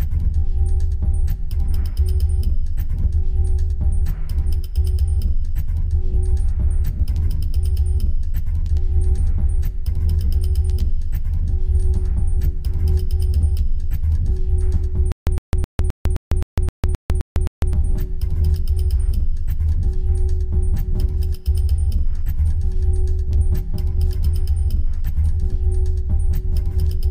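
From 15.12 to 17.73 s there is a stutter with silent gaps. A 111 ms burst repeats ten times. Each is followed by 151 ms of digital silence. The likely cause is a stalled stream replaying its last fragment. The intended audio is lost.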